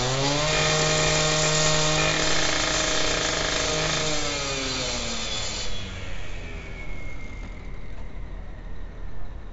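4-bit ADPCM compression runs through the whole clip of sounds. Each sample is coded as a coarse 4-bit step from a prediction, so the error rides as gritty hiss on every loud moment and smears sharp attacks. Heavy damage and nothing above 7.7 kHz point to a low sample rate, consistent with a 64 kbps stream.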